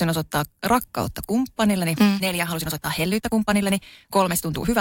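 From 1.69 s to the end, the speech abruptly runs 1.49 times faster at unchanged pitch, a time-stretched section that sounds rushed. Software likely squeezed it by dropping short pieces. A spectrogram shows compressed syllables with harmonics at unchanged height.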